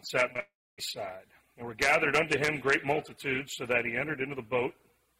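At 0.33 s and again at 0.37 s come two short concealed packet losses, each about 20 ms of audio that arrived too late and was patched by extending the preceding sound. They register as quick smears or wobbles, unlike a dropout. From 0.40 s to 0.80 s the sound continues as a fading buzz, then falls to about 260 ms of near silence before the audio resumes further along with a piece skipped. This pattern points to a long network dropout, likely one that cost about 0.38 s of audio and was far too long to conceal.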